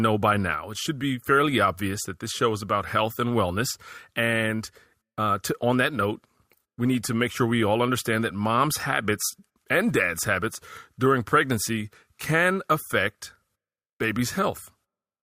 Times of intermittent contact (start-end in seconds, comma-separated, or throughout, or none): none